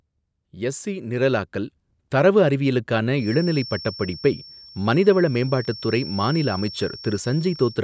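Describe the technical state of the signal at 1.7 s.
At 1.7 s the automatic gain control is mid-correction. Having judged the microphone input too quiet, it is raising its gain gradually in an automatic gain rising that runs from 0.38 s to 2.48 s and lifts the level by about 7 dB overall. Because the gain stage cannot separate speech from room noise, the voice and the background swell together, giving a slow upward drift in loudness rather than a sudden jump.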